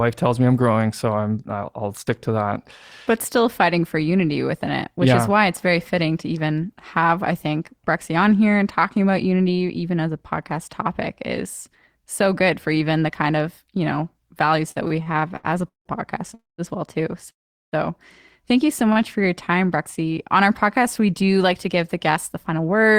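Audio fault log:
14.71–15.88 s, repeated stalls (stutter): ten gaps totalling 420 ms, the longest 173 ms, make up about a third of this span. Late-arriving packets kept draining the jitter buffer, so the last sound was held each time, fading in the longer waits. Nothing is lost, but the speech drags and stutters.
16.34–16.61 s and 17.30–17.75 s, call audio freeze: two holds of 241 ms and 417 ms, the first just before "as well too" and the second just after it. The last sound decays into near silence for 180 ms and 400 ms. This is likely from packets held up in transit emptying the jitter buffer. Playback resumes where it stopped, so delay grows by the held amount.
18.92–18.98 s, short stall from a late packet: just after "you so", a packet missed its playout time, and the receiver stretched the preceding sound by 28 ms until it arrived. No audio is missing, but one sound is held slightly long with a faint buzz or dip.
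21.30–22.96 s, jitter buffer speed-up: the buffer had built up excess delay, so the receiver repeatedly cut out pitch-period-length pieces, about 150 ms in all. Speech runs at 109% speed with unchanged pitch, which makes the closing section sound hurried.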